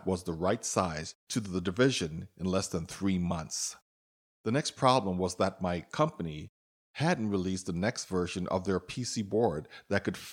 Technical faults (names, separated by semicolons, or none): none